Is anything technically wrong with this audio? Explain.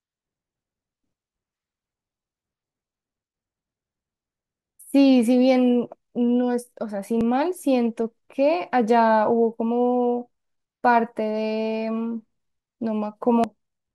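Yes, there is damaged data in a compressed stream at 7.21 s and 13.44 s: corrupted frames throw the decoder out of sync, giving brief glitches that show as narrow vertical smears on a spectrogram.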